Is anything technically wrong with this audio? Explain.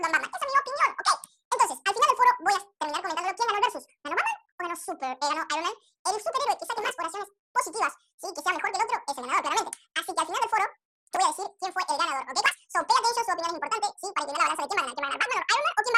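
Yes. Throughout, the audio has been read two samples at a time, at double speed. Each pair of samples is treated as one frame, as if the data held two channels or wider samples. Playback therefore runs twice as fast and 12 semitones higher, an octave up.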